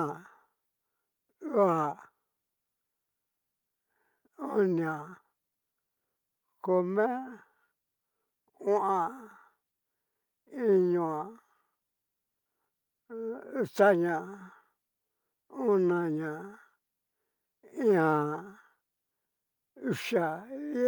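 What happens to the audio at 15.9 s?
At 15.9 s the speech carries straight through with no dropout, click, distortion or other fault.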